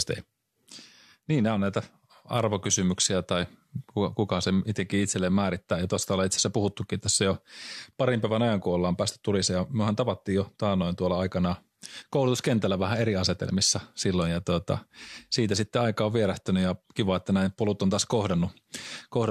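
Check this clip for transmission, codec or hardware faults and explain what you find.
Nothing found: no audible fault anywhere in the speech.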